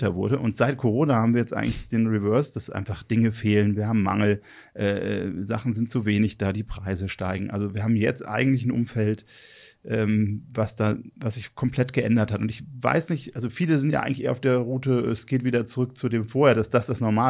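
Nothing in this speech recording stands out as a technical fault, so there's nothing to flag here.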